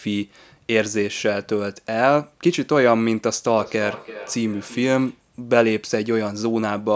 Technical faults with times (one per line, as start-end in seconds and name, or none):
3.58-5.27 feedback echo between two devices